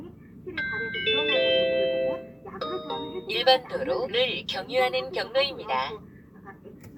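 Nothing stood out on listening to this recording of everyday sounds.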